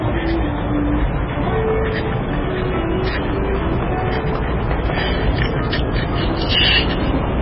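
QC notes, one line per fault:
Throughout: hard clipping. The loudest moments are driven about 16 dB past what the signal path can carry, so their peaks are sheared flat. Only a small share of the audio, around two percent, crosses that ceiling. It is heard as a harsh, buzzy crackle on the peaks. Soft saturation would round the peaks and add a warmer, gentler grit. These flat tops spray harsh high harmonics instead.
Throughout: MP3 compression. Everything above 5.5 kHz is gone, leaving the audio dull and boxed-in. What remains sounds watery and swirling, with faint components flickering in and out and transients smeared rather than crisp. This is likely heavy MP3 encoding at a very low bitrate, around 16 kbps. The flickering and smeared attacks set it apart from a plain low-pass filter, which would remove the treble while leaving everything below it stable.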